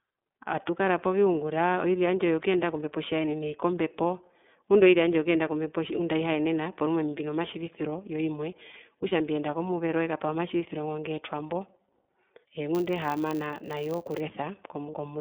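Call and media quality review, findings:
iLBC codec, throughout. Narrowband line, roughly 250 Hz to 3.6 kHz; nothing above. Speech clear but plainly rough and synthetic. Each frame's excitation coded independently, consistent with iLBC's 13.33 kbps mode and its 30 ms frames. Probable component: codec negotiation on the call leg.

Lost iLBC frames, 9.09 to 9.12 s, between "mbino matjivisiro yo imwe" and "mbiyenda komuvero ekapaha". Brief held, buzzy fill, about 30 ms, fits one dropped frame. Decoder repeated last pitch cycle with noise; frames stand alone, so recovery immediate. Probable component: network/jitter buffer.

Filter restarted on every block, 12.75 to 14.22 s. Steady 100 Hz buzz tracking speech level. Filter state discarded per block, each starting from silence with a small transient; the rate suggests 10 ms blocks. Probable component: post-decode DSP stage.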